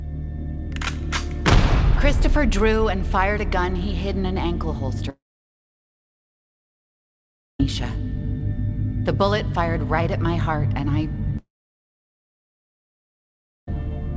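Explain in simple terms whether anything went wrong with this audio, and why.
The sound briefly fades, then cuts to silence from 5.10 to 7.60 s and again from 11.37 to 13.68 s, likely a long network dropout losing those parts entirely.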